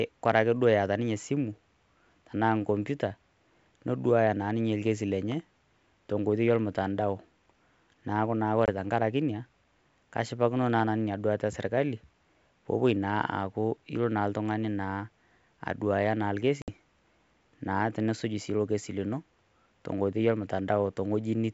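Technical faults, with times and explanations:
8.66 to 8.70 s and 16.62 to 16.72 s, packet loss on an ADPCM call: packets were dropped, about one at 8.66 s and about three at 16.62 s, and filled with silence, leaving hard-edged holes of about 20 ms and 60 ms in the speech. Because G.722 at 64 kbit/s encodes each sample as a difference from a prediction, the decoder's predictor and step size drift away from the sender's during each gap. When sound resumes it comes back slightly distorted until the two realign.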